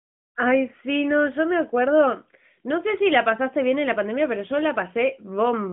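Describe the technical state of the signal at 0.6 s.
At 0.6 s the signal is intact, with no fault to be heard beyond the narrowband telephone character of the AMR-NB mobile codec it passes through.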